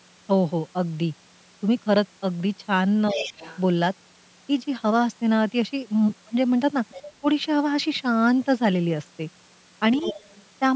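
Other side's voice leaking through first appears from 3.09 to 3.6 s: a faint second voice, roughly 15 dB below the speech, sits under the talker, likely because the loudspeaker's playback reached the microphone and the echo canceller left part of it behind.

Speech suppressed in double talk overlaps it from 3.13 to 3.34 s. The talker's voice sinks by around 10 dB for about a fifth of a second while both sides sound at once, likely as the canceller, unable to separate the two, pulled everything down.

The leaking voice returns more quietly, around 20 dB down, from 6.89 to 7.13 s. Just after, from 7.2 to 7.25 s, a brief suppression cuts the speech by about 20 dB, lasting roughly 50 ms.

The strongest leak comes from 9.96 to 10.43 s, only about 10 dB under the speech.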